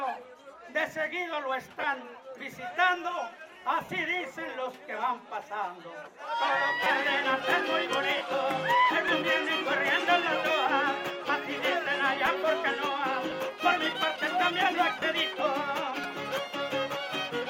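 Around 1.81 to 1.84 s there are lost LE Audio frames. About 22 ms of the stream went missing, which fits three 7.5 ms LC3 frames, and the decoder filled the gap by replaying the last spectrum with scrambled phase. Any tonal content turns into a brief noisy smear. The same thing happens at 3.84 to 3.89 s and again at 8.16 to 8.21 s, each a 45 ms gap, so the smear lasts longer and starts fading toward quiet by the end.

At 6.84 s there's a repeated buffer. The playback side didn't get fresh audio in time and played the same chunk three extra times. The chunk length fits a 256-sample buffer of about 5 ms. Because the chunk is so short, the hard joins come out as a quick buzzy click rather than an audible stutter, and roughly 15 ms of real audio is skipped. Single repeats give shorter clicks at 9.08 s and 12.26 s.

More lost frames follow at 13.30 to 13.32 s, a 15 ms gap, and at 15.00 to 15.02 s, another 22.5 ms gap. 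Both produce the same short noisy blur.

The clip ends with one more repeated buffer at 16.04 s. This time the chunk plays twice extra, giving a slightly longer buzz and dropping about 10 ms.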